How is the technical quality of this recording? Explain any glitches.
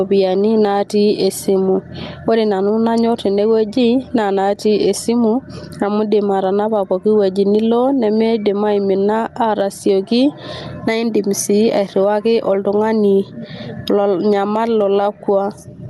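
The recording has one clear problem: gain pumping runs through the whole clip. Throughout, the gain swings by around 15 dB, pulling down whenever speech gets loud. This likely comes from the input gain being set far too high, with a fast limiter clamping down on each loud syllable. It sounds squashed and breathing. On a waveform the peaks look flattened and even, and the quiet stretches rise between phrases. The speech also passed through a call codec, and the spectrogram shows its content stopping near 12 kHz.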